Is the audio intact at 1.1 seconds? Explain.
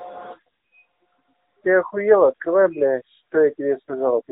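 No. The AMR narrowband mobile codec affects the whole speech clip, including 1.1 s. This codec samples at 8 kHz and rebuilds speech from a vocal-tract model driven by a few pulses in each 5 ms part of a 20 ms frame, so nothing above 4 kHz survives. The result is muffled, band-limited speech with plainly audible synthetic coding damage, which points to a mid-range mode near 10 kbps.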